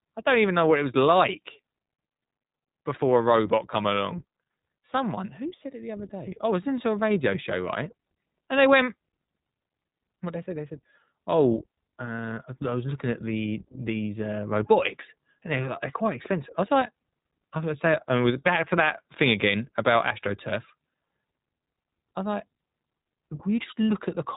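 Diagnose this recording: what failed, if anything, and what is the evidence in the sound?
The failure sits at the codec stage. It is iLBC codec damage, present from start to finish. The speech has no content above about 3.8 kHz, so it sounds narrowband and boxed in. A rough, slightly synthetic texture runs through every phrase and is plainly audible. Each short frame's excitation is coded on its own, with no help from the frame before. The grain points to 20 ms frames at a rate that fits 15.2 kbps.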